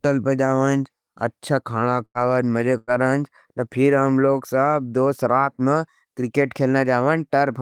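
At 2.05 to 2.18 s and again at 2.77 to 2.93 s there is a burst of packet loss. The receiver stretched the last sound over roughly 93 and 100 ms, fading it, then resumed with about 60 ms of speech skipped each time.

From 4.93 to 5.37 s, just before "में क्रिकेट", a jitter buffer speed-up trims short pitch-period slices, about 50 ms in total, to reduce excess buffered delay. The speech runs at about 110% speed at unchanged pitch and sounds briefly hurried.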